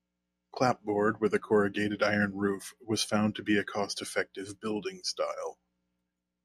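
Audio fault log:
0.74 s, DAB burbling: a brief burst of burbling just before "with a corrugated iron", as weak reception let bit errors at roughly 0.2 percent slip past error correction into the MP2 data, corrupting samples so individual sub-bands carried short blips of noise.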